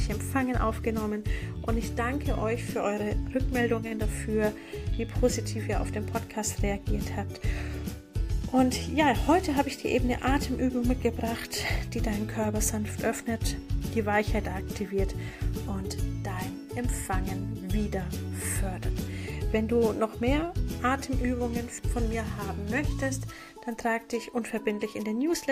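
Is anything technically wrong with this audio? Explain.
Yes. There is one short stall from a late packet, between about 3.87 and 3.93 s. A packet arrived late and the jitter buffer ran dry. The receiver held the last sound for about 40 ms until the packet turned up, then carried on from the same point. Nothing is lost. Everything after it plays about 40 ms later. You hear a brief hold on the sound, with a slight buzz or dip.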